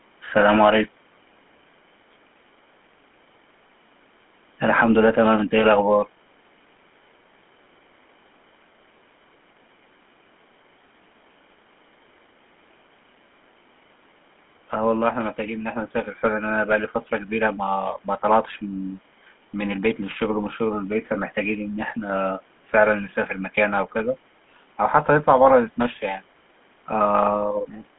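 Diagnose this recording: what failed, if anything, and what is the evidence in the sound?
GSM full-rate codec, throughout the speech. The damage is plainly audible: a buzzy, gravelly roughness on the voice, with the sound confined to a 200 Hz to 3.4 kHz telephone band. At the codec stage, the coder models the vocal tract and excites it with regularly spaced pulses, keeping only every third excitation sample, which fits a 13 kbps full-rate coder. The call microphone's ordinary bass high-pass sits upstream.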